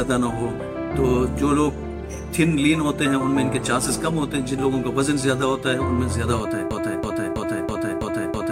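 At 6.71 s the audio falls into a broken-record loop: a fragment of about 0.33 s repeats exactly, back to back, six times, and the loop runs to the end of the clip. Each repetition is identical, giving a rhythmic stutter at roughly three cycles per second instead of continuing sound. The likely cause is a stalled player, encoder or stream that kept resending the last fragment it held, so the audio that belonged in those final seconds is missing.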